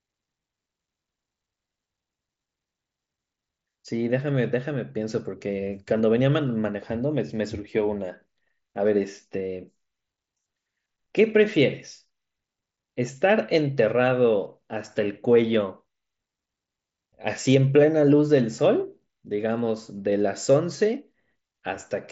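No technical faults can be heard in the speech, which arrives over a wideband Bluetooth mSBC headset link with a bandwidth that stops at about 7.7 kHz and the light grain that codec leaves on louder passages.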